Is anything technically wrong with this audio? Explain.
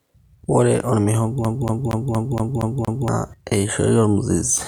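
Yes. From 1.45 to 3.08 s the speech is stuck like a CD on one turn. A scratch keeps throwing the laser back. The same 0.23 s snippet repeats seven times, with brief mutes between.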